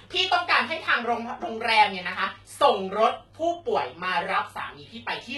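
From start to finish, the s sounds and other hissy consonants come out gritty and lispy, with a metallic sheen on the treble that never quite matches the body of the speech beneath it. The top end stays bright but sounds pasted on. This is heavy damage, likely from HE-AAC compression, where the upper spectrum is rebuilt by copying lower bands upward under a coarse envelope, so harmonics misalign across the crossover, as fits a bitrate near 16 kbps.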